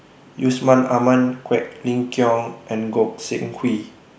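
No technical faults are audible.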